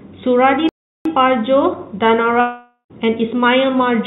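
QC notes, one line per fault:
0.69–1.05 s, playback stall: speech cuts to silence for about 364 ms, then resumes where it stopped, likely because the player ran short of data or was blocked.
2.40–2.92 s, long network dropout: about 500 ms of speech is lost, likely in transit; concealment fills it with a fading buzz, then about 90 ms of silence, and speech resumes later on.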